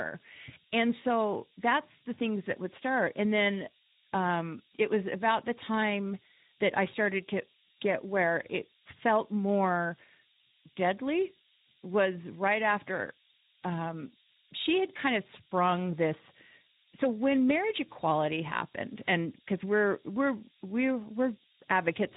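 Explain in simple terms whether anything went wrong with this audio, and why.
Two things went wrong, both lasting the whole clip. The speech was stored with low bit depth and noise shaping: very few bits, about five judging by the sound, with the rounding error pushed upward, leaving a steady, thin hiss nearly as loud as the speech and brightest at the top. The speech also went through the Speex codec at a low setting, which makes voices noisy and hoarse and removes everything above 3.8 kHz, so the speech sounds muffled.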